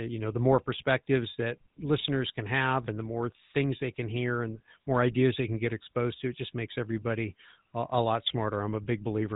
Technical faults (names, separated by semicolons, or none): GSM full-rate codec